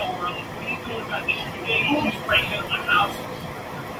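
Nothing technically wrong turns up anywhere in this short bit of speech, so there's no fault here to point at or explain.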